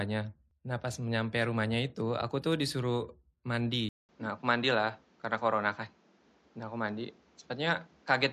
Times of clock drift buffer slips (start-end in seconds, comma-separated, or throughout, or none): none